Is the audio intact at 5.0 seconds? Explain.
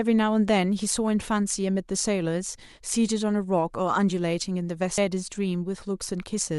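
No. At about 4.98 s the speech jumps abruptly forward, with a brief blip at the join and a stretch of the programme simply missing. This is a stream segment skipped: a chunk of the segmented stream likely failed to load, and the player carried on from the next one. Unlike a dropout, there is no gap of silence where the sound pauses and resumes in place; the audio skips ahead in time, so the continuity breaks.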